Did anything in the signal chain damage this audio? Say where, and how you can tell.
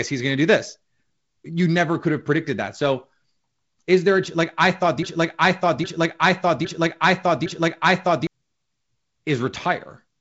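Yes. The playback or streaming stage likely stalled at 5.03 s, just after "a like I thought", and kept resending the last fragment it held: a broken-record loop. A piece about 0.81 s long plays four times back to back, through 8.27 s, with identical content and timing on each pass. The new audio that should have filled that stretch never arrives, so the speech resumes later with that portion lost.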